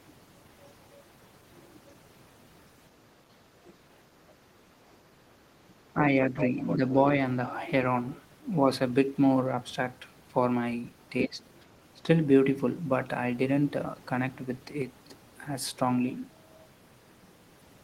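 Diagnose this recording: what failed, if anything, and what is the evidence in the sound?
Speech suppressed in double talk at 3.3–3.35, 5.94–6.12, 6.77–6.82 and 11.24–11.4 s: the talker's level dips briefly, by a few dB up to about 20 dB at 11.24 s. Call processing stage: the echo canceller likely mistook overlapping speech for echo and turned everything down.

Other side's voice leaking through at 6.37–6.46, 6.62–6.76 and 11.61–11.65 s: short scraps of a second voice. The first two are fairly prominent, about 5 to 10 dB below the talker, and the last is barely audible. Call processing again: the canceller likely left residual loudspeaker echo in the microphone signal.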